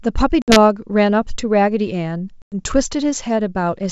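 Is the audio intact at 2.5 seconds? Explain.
No. Packet loss on an ADPCM call cuts a hard silent gap from 2.42 to 2.56 s. The decoder then loses step, so speech returns slightly distorted.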